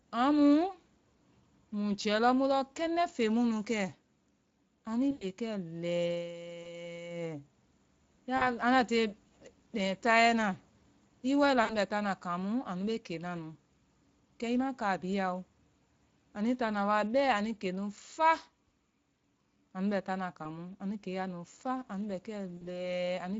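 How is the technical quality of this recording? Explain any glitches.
The recording is speech carried over a low-rate speech codec, with coding damage throughout and six short dropouts that the decoder has patched over.

Speex codec, throughout: the speech sounds hoarse and grainy because the CELP coder has too few bits to model the excitation, which fits a Speex setting near 20 kbps. Unlike broadband noise, this roughness follows the voice and disappears in pauses.

VoIP packet loss concealed by the speech codec, at 5.11–5.26, 6.63–6.67, 8.37–8.57, 11.63–11.75, 20.43–20.46 and 22.57–22.63 s: the decoder extends the last pitch into a fading buzz or tinted noise, with the longest gap fitting about 100 ms of missing audio. Unlike a hard dropout, the gap is filled with extrapolated sound, and the voice stays weak briefly afterwards.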